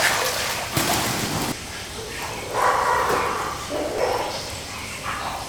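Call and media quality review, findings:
Brief blips at 1.52 s and 3.98 s. Damaged data in a compressed stream: corrupted bytes upset the decoder, which misreads those frames before resyncing.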